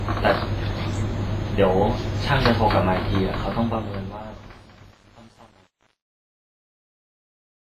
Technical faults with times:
0.00-7.60 WMA compression
3.39-7.60 truncation distortion on a fade

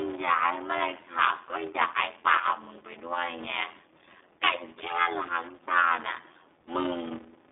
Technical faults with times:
0.00-7.52 block size mismatch (padded)
0.00-7.52 iLBC codec
1.35-1.39 lost iLBC frames

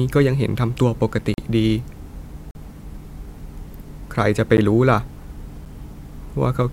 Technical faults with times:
1.34-1.38 block of digital silence
2.51-2.55 block of digital silence
4.57 block of digital silence
5.65 block of digital silence

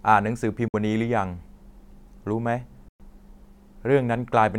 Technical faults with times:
0.68-0.74 Bluetooth dropout
2.88-3.00 Bluetooth dropout

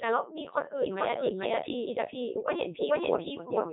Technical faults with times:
0.00-3.73 doubled audio track
0.00-3.73 Codec 2 vocoder

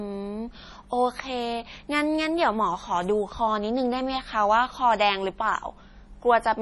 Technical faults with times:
0.00-6.62 MP3 compression

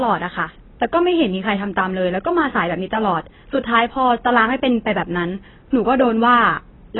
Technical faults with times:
0.00-6.99 AAC compression

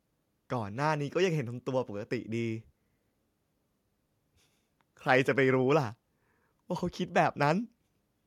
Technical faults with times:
none

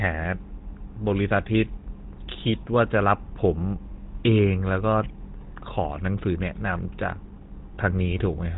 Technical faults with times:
0.00-8.57 GSM full-rate codec

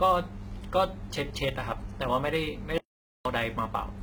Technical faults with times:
0.00-4.03 HE-AAC compression
0.00-4.03 sample clock jitter
2.78-3.25 audio dropout to silence

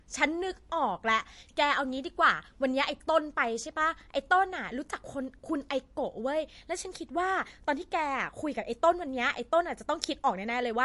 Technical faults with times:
0.00-10.85 MP3 compression

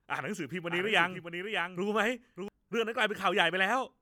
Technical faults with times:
0.70-2.48 doubled audio track

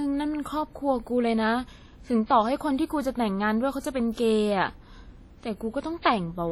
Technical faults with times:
0.00-6.51 WMA compression
3.80-3.84 pre-echo
6.02-6.05 pre-echo

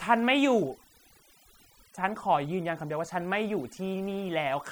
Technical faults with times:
0.00-4.71 overdone noise removal

